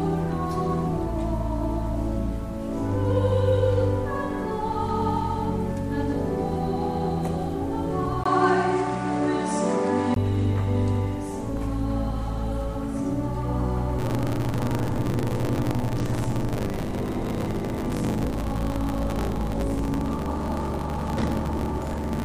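At 8.24 s the sound turns dull and boxy after a brief gap of about 20 ms. The level shifts by about 5 dB, and a new, faint noise floor sits roughly 40 dB below the signal. The likely cause is the input switched to a poorer device, a different microphone or a headset's call profile with a narrower band and its own tone. The fuller sound returns at 10.16 s.

From 13.98 s to the end, a steady robotic buzz at 50 Hz rides on the sound and is present only while there is signal. This is buffer tearing. The writer and the hardware reader of the ring buffer have drifted so that they cross inside every period, which points to periods of about 20 ms. Roughly half of each buffer replays audio about 40 ms old, and the hard joins on either side produce the rattle.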